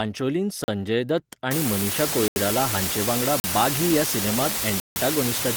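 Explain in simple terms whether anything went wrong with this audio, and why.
Four blocks of digital silence cut the speech at 0.64 s (40 ms), 2.28 s (80 ms), 3.4 s (40 ms) and 4.8 s (160 ms), where sound stops and returns abruptly. From 1.51 s to the end, an unreliable data bit adds a constant crackle, even in pauses, because one bit in the samples keeps flipping.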